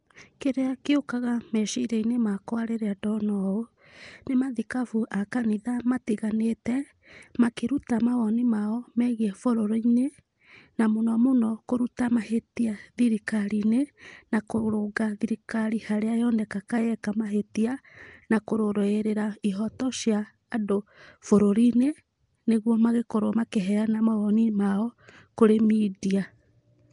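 Throughout the clip the speech has a rough, hissy halo and a smeared, underwater quality, with nothing above 10.6 kHz. This plainly audible damage is likely Nellymoser compression. The coder works on short blocks with very few bits, leaves weak bands empty and fills them with noise. Its coarseness fits a rate near 44 kbps.

At 6.65 s and again at 17.03 s, a sharp onset is preceded by a brief hiss and arrives softened. The hiss lasts 12 ms the first time and 11 ms the second. This is pre-echo. The codec spreads its noise evenly across each block, so noise sized for the loud attack also fills the quiet instant just before it.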